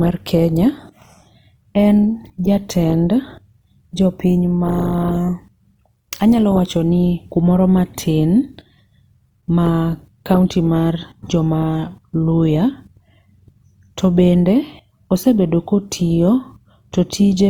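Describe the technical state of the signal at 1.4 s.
Opus compression is present at 1.4 s and throughout, likely from the music (CELT) mode near 24 kbps filling starved bands with folded or noise content, leaving speech plainly rough and grainy.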